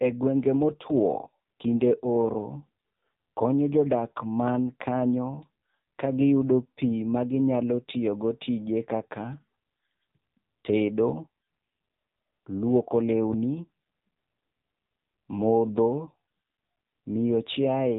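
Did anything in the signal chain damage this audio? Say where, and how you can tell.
Yes. The codec stage damaged it: the speech runs through the AMR narrowband mobile codec for the whole clip. Nothing sounds above 3.8 kHz, so a spectrogram shows a flat ceiling with empty space above it. The voice is buzzy and synthetic, with heavy damage that points to a low mode of about 6.7 kbps. Here only a few pulses per subframe drive a vocal-tract model, so harmonics look smeared and blocky in 20 ms steps.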